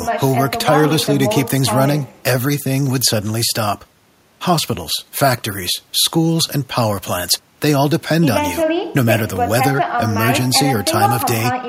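At 9.36 s there is a single overlapping-chunks fault. The speech appears to have been handled in blocks of about 5 s, and one block starts slightly before the previous one finished. About 20 ms of sound is therefore played twice at the join. The repeat is too short to hear as an echo. It comes across as a brief click or small stutter, a tiny hitch in the flow of the speech.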